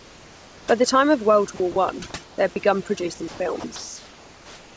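Throughout, overdone noise removal leaves twinkling specks in the gaps, because bands near the noise estimate are pulled down along with quiet parts of the voice. From 0.00 to 0.68 s the background becomes steady, featureless hiss about 4 dB quieter, likely comfort noise in place of the background. Unlike the specks, it does not flicker. At 1.56 and 1.72 s, 40 ms of speech gives way to that same even noise, likely sound dropped by the voice detector; speech is lost here, not just background. Comfort noise returns at 2.24 to 2.38 s, just before "they had begun producing", and at 3.28 to 3.40 s, about 1 dB louder. Another 40 ms dropout comes at 3.60 s, after "they had begun producing", and comfort noise fills 3.76 s to the end, about 1 dB quieter.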